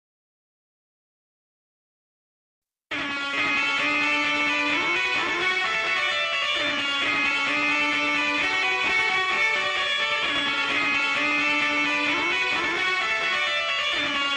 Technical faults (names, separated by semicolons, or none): none